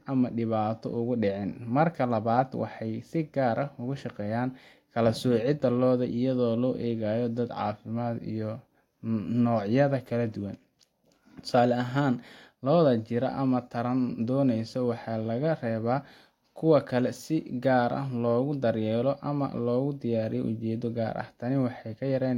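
Nothing to flag in this bit of speech: no technical faults turn up anywhere along the way.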